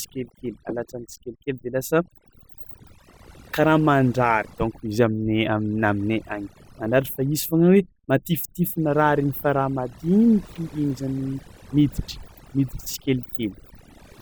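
A speech recording carrying overdone noise removal from start to finish. Between phrases the background collapses to near silence sprinkled with twinkling, tonal specks, and quiet parts of the voice go with it, because quiet frequency bands near the noise estimate are being pulled down along with the noise. That separates it from a simple noise gate, which shuts the whole signal at once, and from low-bitrate coding, where the smearing doesn't track a noise floor.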